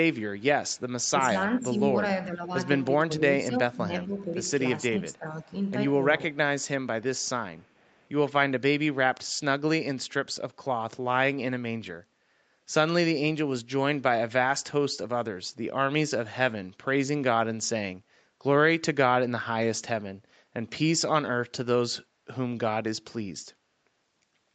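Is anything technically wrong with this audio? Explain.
Yes. An echo leak appears from 0.14 to 1.09 s and again from 7.02 to 8.09 s. It is a very faint copy of the speech, roughly 40 dB down and trailing about 0.45 s behind, likely left in by an echo canceller on the far end. Unlike room reverberation, it arrives at one fixed lag instead of decaying smoothly.

Speech suppressed in double talk dims the talker at 1.17–1.9 s, 2.26–2.52 s, 3.07–4.33 s and 4.94–5.53 s. The drops are about 5 dB at first and deepen to about 15 dB. This is likely the canceller turning everything down while both sides spoke at once. Unlike a network dropout, the speech sinks in patches instead of vanishing.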